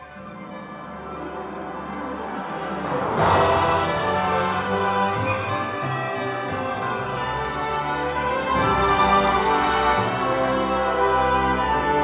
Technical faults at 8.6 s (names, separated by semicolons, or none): none